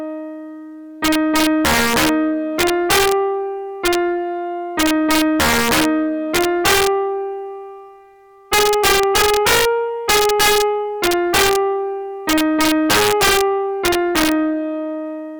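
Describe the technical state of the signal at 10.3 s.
At 10.3 s the loudest peaks break into harsh, violent cracks, far sharper and more abrupt than ordinary clipping, and the same damage runs through the whole clip. This is integer overflow: the signal was driven about 6 dB past the integer limit, and instead of being capped, each peak over the ceiling wrapped around to the opposite sign, leaping across the full range. Only a few percent of samples cross that limit, so the cracks land on the loudest moments.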